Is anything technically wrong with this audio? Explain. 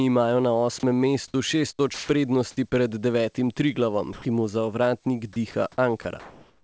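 Yes. The speech passes through what sounds like a wideband call codec with nothing above 8 kHz, and its voice detector causes three kinds of fault.

Onset clipped by the voice detector, at 1.32 s: the sender's detector was likely late to register that sound had resumed, so the first 20 ms were never transmitted and the receiver substituted comfort noise. The sound enters abruptly, missing its soft start.

Sound dropped by the voice detector, at 1.94–2.09 s, 4.13–4.25 s, 5.33–5.36 s, 5.51–5.54 s and 6.02–6.05 s: the detector likely mistook sound for background and stopped sending. Stretches of 150, 120 and 30 ms become steady noise, with up to 70 ms of actual sound lost each time.

Comfort noise in place of the background, from 6.20 s to the end: during this pause the sender likely stops transmitting, and the receiver generates synthetic noise roughly matched to the background, about 39 dB below the loud parts and at the same level. 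The real background becomes a smoother noise of a different tone.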